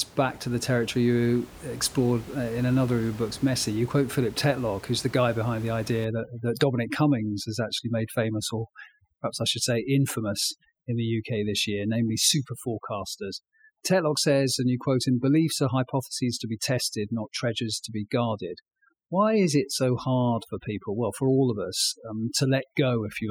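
From about 6.05 s to the end, there's overdone noise removal. The denoiser is clamping frequency bands near its noise estimate, so the room noise, about 21 dB under the speech before that point, collapses into twinkly specks.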